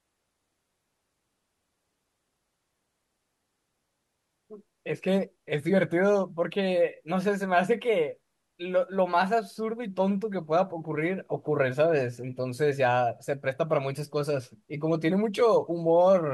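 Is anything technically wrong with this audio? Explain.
No, nothing is technically wrong with this audio.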